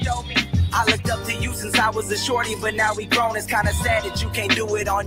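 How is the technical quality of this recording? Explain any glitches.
The technical quality is compromised by a speech-oriented noise suppressor that was left running on non-speech audio.

Noise suppressor applied to music or sounds: Throughout the clip, the suppressor treats sustained and ambient parts of the sound as noise and keeps reducing their gain, with its loss swinging by around 10 dB. Onsets slip past before it reacts, but held material and decaying tails are pulled down. The result is an unsteady, pumping level and a thinned-out body to the sound.

Sound cut by the noise suppressor: At 0.21 to 0.53 s and again at 0.98 to 1.34 s, the suppressor classifies a stretch of the sound as noise and clamps it harder than the surrounding audio. The dips reach about 6 dB in the first span and about 5 dB in the second, each covering roughly a fifth of a second in total. Sustained or fading parts sag audibly there while any sharp attacks remain intact.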